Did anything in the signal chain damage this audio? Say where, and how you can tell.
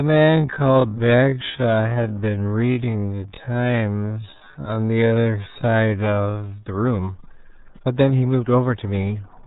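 Yes. The damage sits at the codec stage. Across the whole clip, nothing comes through above about 4 kHz. The speech is muffled and gargly throughout. That sound is the RealAudio 14.4 codec, a dial-up era speech coder. The heavy damage and the narrow band fit an 8 kbit/s bitrate. At that rate the coder keeps only a crude model of the voice, so fine detail and the upper band are discarded.

There is also a time-stretched section, from 0.0 to 6.62 s. There the pace runs at half speed, but the pitch does not drop. At 6.62 s the pace snaps back abruptly. This was likely software stretching the audio to fill a length. It holds pitch by repeating short pieces of the waveform.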